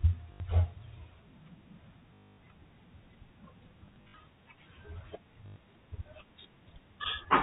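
Short robotic stutters interrupt the speech at 0.32 to 0.40 s, 2.14 to 2.38 s (the longest, a steady buzz), 3.86 to 4.14 s (broken into several brief bursts, none over 60 ms), and 5.46 to 5.56 s. This is packet loss with the last packet repeated. The receiver replayed its last packet, out of step with the pitch, and the 50 Hz buzz fits 20 ms packets. The narrow G.711 telephone band is unaffected.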